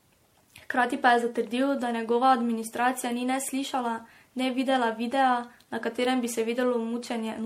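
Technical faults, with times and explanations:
Throughout, generation loss: the speech sounds swirly, smeared and hollow, with blurred consonant attacks. This is likely from about five rounds of MP3 re-encoding at what sounds like 64 kbit/s, each pass requantising on a shifted frame grid. A spectrogram shows a hard ceiling at 16.5 kHz and patchy, holed upper bands.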